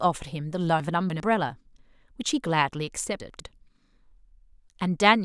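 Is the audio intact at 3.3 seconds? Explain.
No. Between 3.2 and 3.4 s the chunks are out of order: one 100 ms chunk arrived a chunk late and plays after the one meant to follow it. Nothing is missing, but three hard joins make a brief jumbled stretch.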